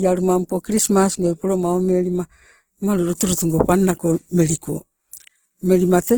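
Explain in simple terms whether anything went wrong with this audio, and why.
The speech sounds rough and grainy from start to finish, likely Opus compression squeezed too hard, so the encoder fills in missing detail with noise.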